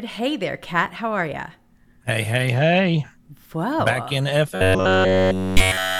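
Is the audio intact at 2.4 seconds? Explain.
Yes, the speech at 2.4 s plays through cleanly, with no dropout, click, distortion or other fault at that moment.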